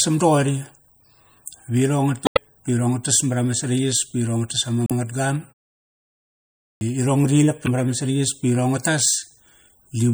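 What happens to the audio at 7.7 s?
From 7.64 to 7.68 s, just before "marama saraiyas", a 40 ms fault occurs: damaged data in a compressed stream. Corrupted bytes in the MP3 stream leave the decoder unable to read those frames correctly, so it loses sync and produces junk until it locks onto a valid frame header again. A clean dropout would go silent. Here it is heard as a brief chirp, squawk, click or short hole that belongs to the decoding failure.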